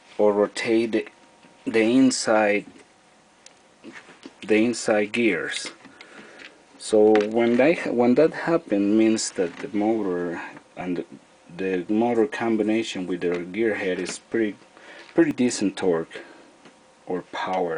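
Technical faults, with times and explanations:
10.81 s and 15.31 s, dropped buffer (overrun): the audio jumps forward with no gap, losing about 10 ms each time. This is likely samples overwritten by the hardware before the program collected them, so the surrounding audio is spliced together directly.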